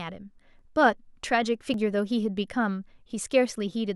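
At 0.59 s and 1.74 s, underruns with held sample freeze the waveform for about 4 and 6 ms. Audio is lost during each gap, but unlike a dropout to silence, the onset makes little or no click.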